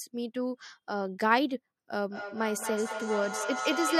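A speech recording develops feedback echo between two devices from 2.1 s to the end. Each word returns roughly every 200 ms, the loudest repeats reaching about 5 dB below the direct speech. The pattern fits two devices sharing a call in one room: one plays out the other's microphone signal, that microphone picks it up again, and neither device's echo canceller can remove audio it did not play itself.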